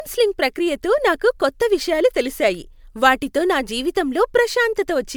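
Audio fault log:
Throughout: generation loss. The speech has a swirly, smeared quality with a hollow tone, more than a single encode at this quality would leave. Consonant attacks are blurred rather than crisp. The likely cause is lossy MP3 coding repeated about four times, which fits a chain at around 128 kbit/s. Each pass quantises again on a shifted frame grid, so noise and spectral gaps accumulate. The band still reaches 20 kHz, so the damage is texture rather than lost treble.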